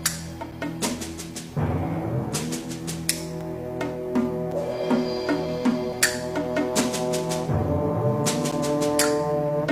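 Gaps between stream segments occur at 0.51, 4.51 and 8.51 s: hard-edged silences of 6 to 9 ms, repeating every 4 s at segment boundaries. A repeated buffer at 3.41 and 5.93 s plays a 5 ms piece twice, heard as a click or brief buzz, with about five milliseconds of new audio skipped.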